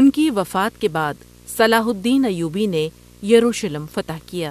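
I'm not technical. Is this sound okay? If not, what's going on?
No. Underneath the speech, from start to finish, there's a faint, steady buzz, a low drone with a gritty edge. That is video or display buzz: a screen or its cable is leaking into the audio, buzzing at the picture's 60 Hz refresh rate.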